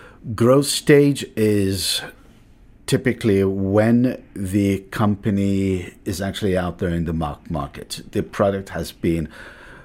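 No faults turn up anywhere in this speech recording.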